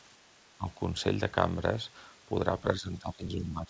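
At 0.57–0.67 s and from 2.78 s onward, the speech dips by roughly 15–20 dB, likely speech suppressed in double talk by the echo canceller.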